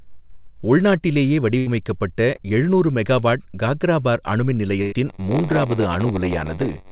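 Speech heard through a narrowband call path, with nothing above 4 kHz, which fits G.711 mu-law at 64 kbps. At 1.58 to 1.68 s the sound hangs as a held, fading buzz or hiss for about 83 ms, then jumps ahead. A second, longer instance runs from 4.82 to 4.94 s, about 98 ms long. Both are a burst of packet loss. Several consecutive packets arrived too late or not at all, and the receiver stretched the last sound while lowering it. About 80 ms of real audio is lost in the first case and about 100 ms in the second, so the talk resumes past the gap. Around 2.36 to 2.40 s there is a brief smear or wobble of roughly 17 ms. This is short concealed packet loss. About 20 ms never reached the decoder, and the receiver patched it by continuing the preceding sound before blending back into the real signal, so a short consonant there may be lost. From 5.06 s to the end, a steady buzz at 93.8 Hz sits under the speech, and delivery drags to 0.938 of normal speed at about its normal pitch. 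This is a block size mismatch (padded). One stage hands over blocks shorter than the next stage reads, and each block is topped up with silence. The buzz rate and slowdown fit a 512-sample read block being filled from shorter written blocks, so a tiny gap recurs in every block.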